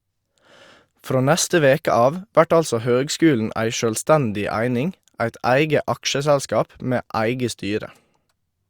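No technical faults can be heard anywhere in this speech recording. There is nothing to locate or describe at any point in it.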